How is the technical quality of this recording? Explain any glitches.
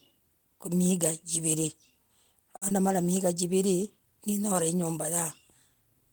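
Two brief network glitches occur close together near the middle of the speech, both of a kind typical of internet calls.

From 2.56 to 2.63 s there is a short stall from a late packet. The packet arrived late, the jitter buffer ran dry, and the receiver held the last sound for about 52 ms until the data turned up. Playback then resumed from where it stopped, so nothing is lost. The sound is stretched, with a slight buzz or dip, and everything after it is pushed about 52 ms later. A real loss would leave a gap in the content instead.

From 2.69 to 2.72 s comes a short concealed packet loss. About 20 ms of audio never reached the decoder in time. The receiver extrapolated from the preceding sound to fill the hole and then crossfaded back into the real signal. This is heard as a quick smear or wobble. Unlike the stall, the timing doesn't shift, but those 20 ms of the original are gone and replaced by a guess.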